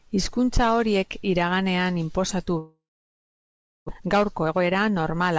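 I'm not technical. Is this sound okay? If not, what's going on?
No. From 2.58 to 3.90 s there is a long network dropout, likely from the connection stalling. The sound trails off as a fading buzz, then goes silent for about a second. Roughly 0.86 s of speech is lost for good.

From 3.95 to 5.33 s a jitter buffer speed-up follows. The receiver had fallen behind, so it snipped out tiny slivers, about a fifth of a second in total. Speech runs about 15% faster and sounds rushed, but the pitch stays the same.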